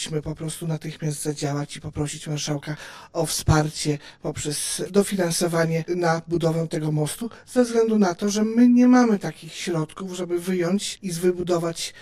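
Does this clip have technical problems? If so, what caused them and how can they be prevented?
Yes. Channel delay (comb filtering) throughout: one channel lags about 20 ms, so the mono sum cancels at evenly spaced notches from around 30 Hz, sounding rough or slightly doubled. Prevent it by aligning channel timing before summing to mono.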